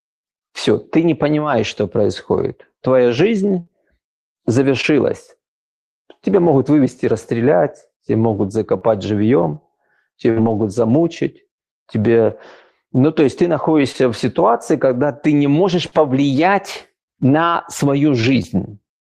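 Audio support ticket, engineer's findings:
Burst of packet loss at 3.59–3.69 s and 10.31–10.38 s, about 80 ms and 60 ms of speech missing. Receiver-side concealment holds the last sound as a buzz or hiss while fading it. Speech then resumes further along, a skip rather than a smear.

Short concealed packet loss at 4.81–4.85, 8.79–8.83, 13.92–13.96, 15.88–15.94 and 18.22–18.25 s, 20–40 ms each. The decoder extrapolates pitch or noise and blends back. This gives a brief wobble or smear, and a consonant may drop.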